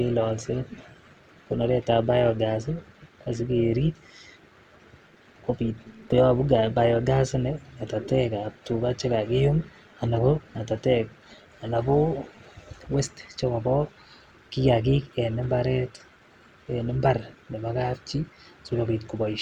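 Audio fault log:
Throughout, overlap-add ripple: windowed frames rejoin with uneven overlap gain, so level swings about 6 dB near 200 Hz, a metallic buzz; the waveform envelope shows regular periodic scalloping.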